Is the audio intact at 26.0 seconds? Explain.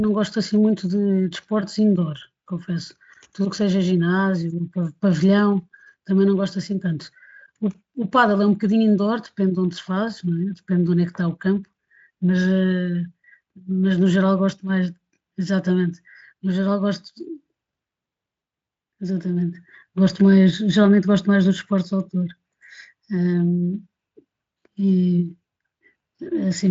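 Yes, the audio is intact at 26.0 seconds, with the speech carried cleanly through the Speex codec and no fault at that moment.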